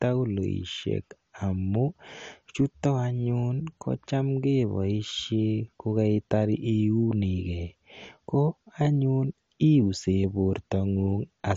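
Speech clip with likely MP2 compression throughout: nothing above 11.2 kHz, and the remaining bands sound coarse, gurgling and granular, which fits a rate near 48 kbps. Unlike a plain low-pass filter, the damage shows as flickering, grainy bands rather than just dullness.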